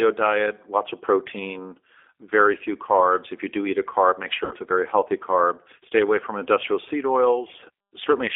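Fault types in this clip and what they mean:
G.729 codec: The audio has gone through a low-bitrate speech codec that rebuilds the voice from a vocal-tract model and a few pulses, consistent with roughly 8 kbit/s. It's band-limited to about 300 Hz to 3.5 kHz, and the rough, slightly synthetic texture is plainly audible throughout.
VoIP packet loss concealed by the speech codec: From 4.45 to 4.55 s, between "eat a carb make" and "a very healthy", packets dropped and the decoder filled the gap by stretching its last sound, which fits about 60 ms of missing audio, giving a brief, fading smear.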